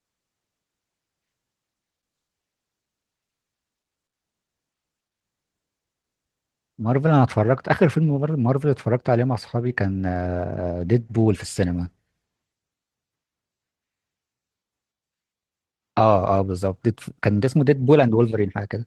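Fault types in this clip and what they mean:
There are no fault types in this clip.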